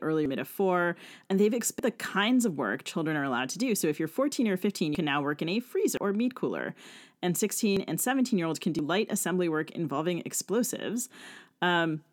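At 0.26 s (just before "of four"), 1.79, 4.95 (before "can now work in"), 5.97, 7.77 and 8.79 s (between "year olds can" and "light assembly work involving"), the speech jumps forward, a dropped buffer (overrun), likely from samples being overwritten before they were read. Roughly a tenth to a third of a second vanishes each time, with no gap. Waveforms show abrupt discontinuities; spectrograms show thin vertical broadband lines where formants break off.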